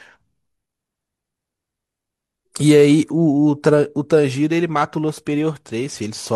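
No technical faults can be heard anywhere in the recording; the signal stays steady and intact throughout.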